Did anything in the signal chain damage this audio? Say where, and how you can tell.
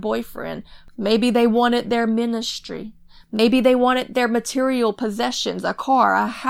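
Yes. At 3.37 s, between "they wanted their ministry" and "they wanted their material", the audio catches on a brief repeat lasting about 23 ms before carrying on. This is a Bluetooth stutter at the wireless link. When a packet arrives late or not at all, the receiver fills the gap by replaying its last short buffer. Playback then rejoins further along, as though the sound had kept running. A single repeat of this length fits one lost packet.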